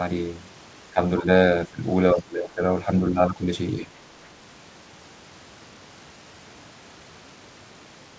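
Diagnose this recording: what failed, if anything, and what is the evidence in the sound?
Speech suppressed in double talk, in the call-processing stage: the speech level dips at 0.92–1.0, 1.22–1.28, 1.68–1.82, 2.15–2.63, 2.85–2.89, 3.1–3.47 and 3.8–3.91 s. The drops range from a slight sag of about 5 dB to about 20 dB at 1.68 s. The longest is roughly half a second. The likely cause is an echo canceller that could not separate this talker from loudspeaker echo while both sides spoke, so it attenuated everything, within the normal 8 kHz band limit of the G.722 call path.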